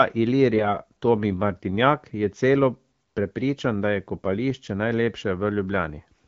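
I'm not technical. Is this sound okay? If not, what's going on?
No. Twice the voice briefly turns hoarse, scratchy and gargly, from 0.54 to 0.78 s and again from 4.16 to 4.26 s. These are AMR bit errors: over a weak phone link, roughly one in twenty of the less important bits arrived wrong, so the phone rebuilt the voice slightly off.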